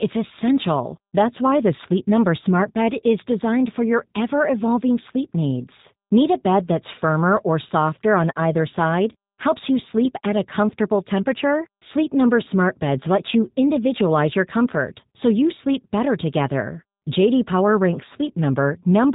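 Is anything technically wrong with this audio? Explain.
Yes, the speech has gone through a low-rate voice codec, and it's audible all the way through. What you're hearing is G.729 coding, most likely the G.729A variant at a rate that fits 8 kbit/s. The codec doesn't send the waveform. It sends a vocal tract filter, a pitch predictor and a few pulses per frame, and the decoder rebuilds the speech from those. The result is clearly rough and a bit synthetic, with nothing above 3.8 kHz, so it sounds muffled, like a phone call.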